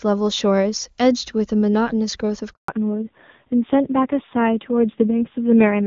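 Speech that cuts out completely from 2.52 to 2.68 s, a 160 ms handover gap, as the call switched networks and no speech frames arrived. From 2.68 s the speech turns dull and rough with nothing above 4 kHz: a fallback to narrowband from clean HD Voice, consistent with a drop from AMR-WB at around 23.85 kbit/s to AMR-NB at about 5.9 kbit/s.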